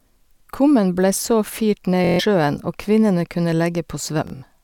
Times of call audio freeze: none

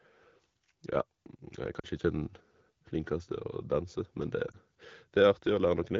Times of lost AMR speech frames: 1.79-1.86, 4.52-4.57

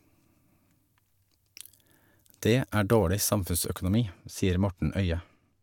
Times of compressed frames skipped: none

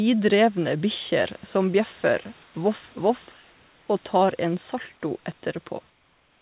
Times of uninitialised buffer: none

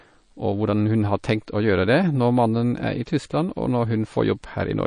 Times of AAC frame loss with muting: none

